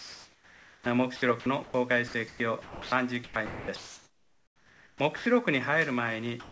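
The audio comes through a call path that tops out at 8 kHz, which fits a G.722 link. The opening 0.00–0.86 s is sound dropped by the voice detector. The sender likely judged the start to be background and stopped sending, so you get steady comfort noise where roughly 350 ms of real sound should be, until the detector kicks back in. The same thing happens at the tail, 6.40–6.52 s, where the last 60 ms or so disappears into synthetic hiss. In between, the sound is chopped by the voice detector in three stretches, again likely because it kept toggling between sending and muting. Across 1.16–1.74 s about 220 ms is swapped for comfort noise, across 2.08–2.92 s about 480 ms, and across 3.24–5.26 s a full 1.68 s. Quiet bits and edges drop out, so it sounds choppy.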